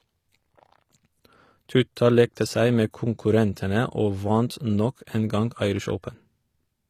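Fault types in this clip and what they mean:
HE-AAC compression: the treble sounds copied up from lower bands, so s sounds go gritty and lispy, nothing above 18.8 kHz, likely HE-AAC around 24 kbps.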